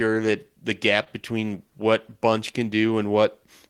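Clock drift between sender and receiver runs through the whole speech clip. The sender's clock is about one and a half percent slower than the receiver's, so the jitter buffer keeps draining and the receiver has to pad the audio, producing small, unevenly spaced timing hiccups.

At 1.04 to 1.08 s, right after "that the" and before "between what", there is a short stall from a late packet. The buffer ran empty, and the receiver held the last sound for 19 ms until the packet arrived. Nothing is lost, but the sound lingers briefly with a slight buzz or dip.

From 2.19 to 3.41 s, after "between what", repeated timing corrections stretch the audio to 97% speed by repeating short pieces, adding around 40 ms. These edits all run in the same direction but are unevenly spaced, and are heard, if at all, as slight hiccups or an unsteady tempo.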